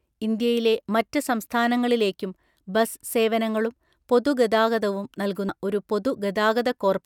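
A brief glitch cuts into the speech at about 5.49 s, right after "സംസ്ഥാനങ്ങളിലേക്കും ബസ് സേവനങ്ങളും പൊതുഗതാഗതവും", lasting only a few milliseconds. It is the signature of damaged data in a compressed stream: a small stretch of the encoded file was corrupted, so the decoder misread that frame, lost its place in the stream and had to hunt for the next valid frame header. That break in decoding while it resynced is the glitch.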